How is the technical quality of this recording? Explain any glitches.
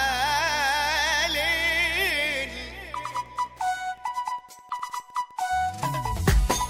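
The recording is marred by one fault that runs the whole way through. Wi-Fi interference: a nearby radio's beacon, every 102.4 ms, gets rectified by the audio circuit, so there's a steady ticking about ten times a second, roughly 35 dB under the main sound.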